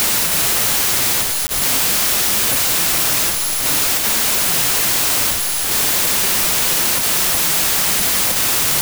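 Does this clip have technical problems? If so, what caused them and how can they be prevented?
Yes. Throughout the clip there is a wrong sample width fault: loud broadband noise buries the original sound, which plays at 0.75 times speed and lower pitch, fitting 32-bit samples read as packed 24-bit. Many values splice bytes from neighbouring samples, so the spectrogram shows dense noise across all frequencies. Prevent it by taking the sample format from the file header instead of assuming it.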